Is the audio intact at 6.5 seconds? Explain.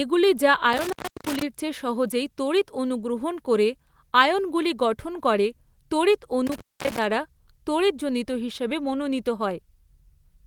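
No. From about 6.47 to 6.99 s the speech drops out abruptly with crackle at the edges, leaving faint hiss through a gap of roughly 244 ms. This is an intermittent contact: a loose plug or cable briefly opening and breaking the signal path.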